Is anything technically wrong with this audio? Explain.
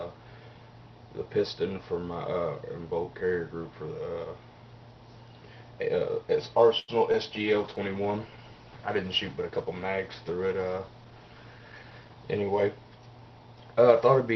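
Yes, there are four faults, all from about 6.8 s onward.

From 6.79 to 6.90 s there is a short stall from a late packet: the jitter buffer ran dry, so the last sound is held for 88 ms with a slight buzz or dip before resuming where it left off.

At 7.12 to 7.15 s a short concealed packet loss drops 20 ms of audio and fills 11 ms by extending the preceding sound, leaving a brief smear or wobble.

From 7.40 to 12.81 s a call bitrate drop makes the sound rougher and duller. The top end falls from 12 kHz to 8 kHz, which fits the Opus encoder dropping from about 32 to 13 kbps.

From 11.58 to 12.15 s a jitter buffer speed-up plays the sound at 114% speed without changing pitch. Repeated pitch-period cuts remove roughly a tenth of a second, and the passage sounds hurried.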